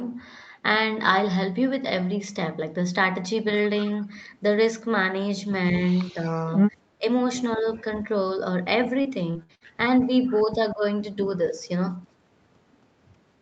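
From 5.87 to 6.45 s there is an echo leak. A faint, delayed copy of the speech trails the talker by 211 ms, about 30 dB below it. The far end likely played the call on a loudspeaker, and its echo canceller let part of that pickup through and sent it back. A brief scrap returns at 10.03 to 10.07 s, with the same 211 ms delay and level.

Speech suppressed in double talk appears in short bursts. It occurs at 6.98 to 7.05 s, with a dip of about 20 dB, and at 7.57 to 7.65 s, with a shallow dip of about 5 dB. The longest stretch runs from 10.45 to 10.83 s, dropping about 15 dB. A last one falls at 11.49 to 11.56 s, again about 5 dB. Both sides were talking at once. The echo canceller likely mistook the talker for echo and turned the speech down. It is heard as sudden dips or clipped pieces.

From 9.01 to 9.66 s there is repeated packet loss with robotic sound. Four holes open up in quick succession, the longest 61 ms. 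Each is patched by stretching the previous sound, so roughly a third of the span is concealed. The result is choppy, with pieces of the speech missing.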